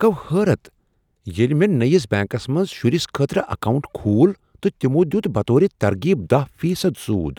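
Nothing is technically wrong with this speech recording.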